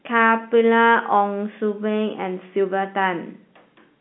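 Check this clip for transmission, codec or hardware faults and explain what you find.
No faults can be heard anywhere in this audio.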